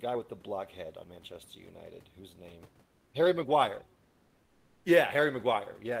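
Comfort noise in place of the background appears from 2.85 to 3.13 s and again from 4.03 to 4.85 s. The background, a room noise sitting about 40 dB under the speech, is replaced for 280 ms and then 820 ms by a smooth, featureless hiss about 2 dB quieter. This is likely discontinuous transmission, as in Opus DTX: the sender stops transmitting in pauses and the receiver fills the gap with synthetic noise.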